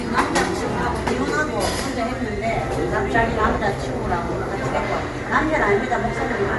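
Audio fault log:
Throughout, Bluetooth LC3 compression likely: plainly audible transform-codec damage gives the sound a grainy, breathy edge, consistent with 10 ms frames at a rate near 48 kbps; a spectrogram shows nothing above 11.5 kHz, with speckled, noise-filled patches below that cutoff.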